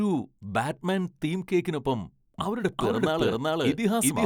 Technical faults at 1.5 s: none

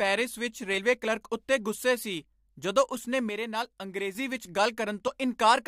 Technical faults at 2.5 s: none

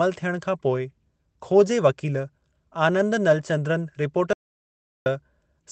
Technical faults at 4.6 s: audio dropout to silence

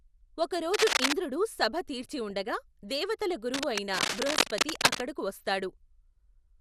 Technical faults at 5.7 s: MP2 compression

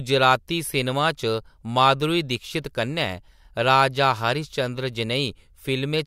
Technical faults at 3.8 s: none

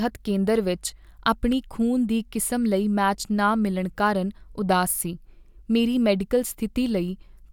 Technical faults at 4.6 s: none

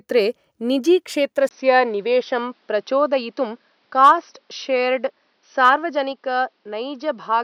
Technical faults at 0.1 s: none

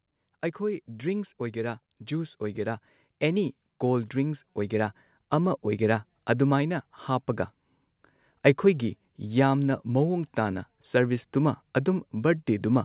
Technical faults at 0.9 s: automatic gain rising

